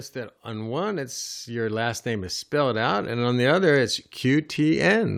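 Automatic gain rising runs from 0.13 s to 5.13 s, across almost the whole speech clip. The gain control judged the incoming level too low and pushed its gain up steadily, by about 12 dB over those five seconds. Because the gain stage acts on everything it receives, the talker and the room noise grow louder together. The result is a slow, even swell rather than a sudden jump, with the background rising alongside the voice.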